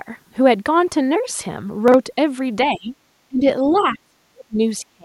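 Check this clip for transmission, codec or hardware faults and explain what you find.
Yes, there are faults: one brief splice error in the speech, then repeated echo-control problems in the second half.

From 1.88 to 1.94 s, chunks out of order. A short stretch of audio, consistent with 20 ms blocks, was played after material that should have followed it, which suggests a block delivered about two block-lengths late. The result is a tiny jumbled stutter. Unlike a dropout or packet-loss concealment, nothing goes missing or gets smeared; the same audio is simply heard in the wrong sequence.

Speech suppressed in double talk appears from 2.72 to 2.94 s, 3.28 to 3.45 s, 3.69 to 4.6 s, and 4.78 s to the end. The talker dips sharply, by around 20 dB in the first instance and around 30 dB in the later ones, sometimes thinning or breaking into fragments. The likely cause is an echo canceller that could not tell local speech from loudspeaker echo while both sides spoke, so it attenuated everything. 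Automatic gain control would ride levels smoothly; these are deep dips.

Other side's voice leaking through occurs between 3.73 and 3.98 s, inside the longest suppressed stretch. A faint second voice, roughly 25 dB below the talker, comes through. This is probably loudspeaker pickup that the echo canceller failed to remove. This residue coincides with the suppression.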